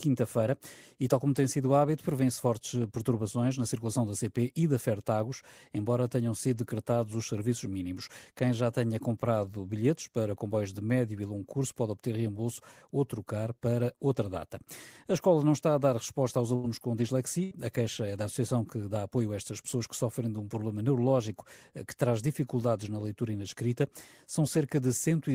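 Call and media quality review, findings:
Burst of packet loss at 16.55–16.66 s and 17.43–17.54 s. Network path, receiver concealment. About 81 ms and 73 ms respectively repeats the last sound, fading, then playback jumps ahead, dropping 80 ms of speech. Consecutive packets lost or arriving too late.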